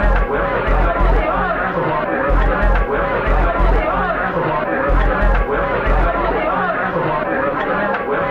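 No technical faults are audible anywhere in this recording.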